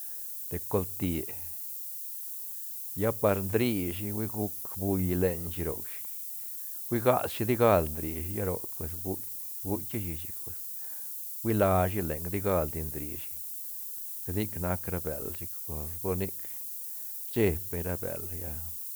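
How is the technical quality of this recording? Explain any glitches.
Poor: a single fault runs through the whole speech recording. Low bit depth with noise shaping leaves a steady, thin hiss nearly as loud as the speech, rising steeply toward the treble. This fits roughly 6-bit samples whose rounding error is pushed upward. Unlike ordinary tape hiss it is tilted sharply high.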